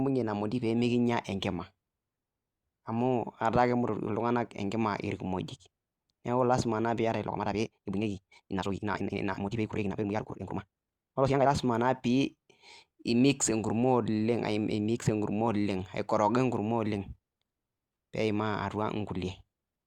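Speech, with a time-stretched section from 7.25 to 11.47 s. The pace jumps to 1.78 times faster at the same pitch, sounding rushed, likely software squeezing it to fit.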